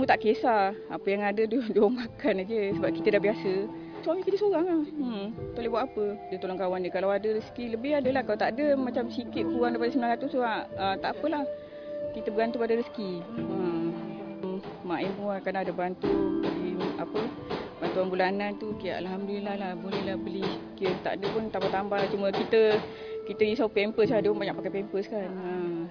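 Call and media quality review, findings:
No audible faults found.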